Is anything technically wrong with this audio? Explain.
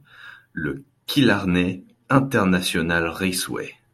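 Yes. From 0.89 s to the end of the clip the speech is carried by an adaptive stream at a lower bitrate. When the connection slowed, the player switched to a leaner encoding of the same stream, consistent with AAC falling from around 96 to 48 kbit/s. Coding artefacts rise, giving the speech a more processed texture. Unlike packet loss or a dropout, the change is a sudden step in quality with no gap or skip in the audio.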